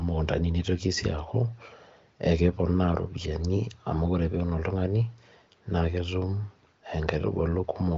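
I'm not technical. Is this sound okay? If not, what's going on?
Yes, nothing in this recording sounds wrong to me.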